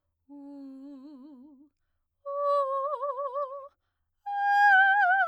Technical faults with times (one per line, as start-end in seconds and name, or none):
none